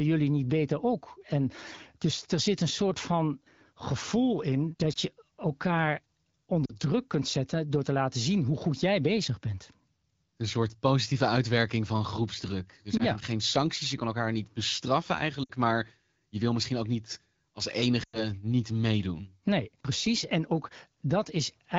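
Lost AMR speech frames interrupt the speech five times, each where corrupted radio frames were discarded and the decoder extrapolated from the last good pitch and vocal tract settings at falling gain. Short dips fitting a single lost frame occur at 4.93–4.98 s and at 12.98–13.02 s, just before "geen sancties je kan". Longer fading gaps follow at 6.66–6.75 s before "druk kunt zetten door", at 15.43–15.51 s after "kan elkaar niet bestraffen", and at 18.03–18.31 s, where the sound drops to near silence within two frames before recovering roughly. The wideband coding texture is faintly audible throughout.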